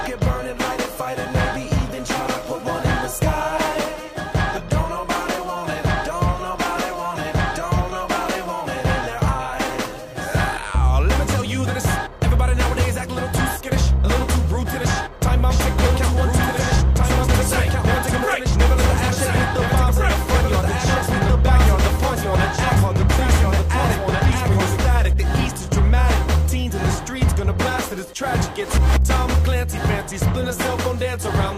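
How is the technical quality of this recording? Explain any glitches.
The recording has one clear glitch. A doubled audio track runs from 15.50 s to 24.78 s: a second, full-band copy trails the original by about two seconds at roughly equal loudness, with no decay or room colour, switching in and out abruptly, likely from a slower capture path or misaligned edit.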